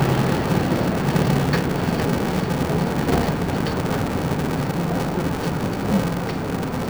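From start to finish, the audio has interleaved audio read as planar. Each block of alternating left and right samples is split into halves; each block is roughly 2.9 ms long, which fits a 128-sample block. The sound turns dull and robotic, with a steady buzz near 345 Hz and no clear octave drop.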